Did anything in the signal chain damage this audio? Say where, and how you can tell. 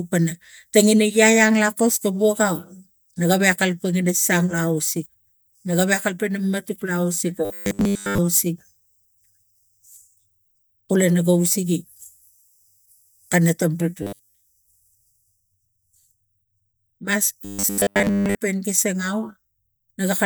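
Yes, there's robotic sound from repeated short buffers at 7.45–8.18 s, 14.03–14.35 s and 17.45–18.40 s. The speech turns into a rigid 100 Hz metallic buzz, completely in the first two and mostly in the last. That pitch points to a 10 ms chunk looping, likely from an underrunning driver buffer.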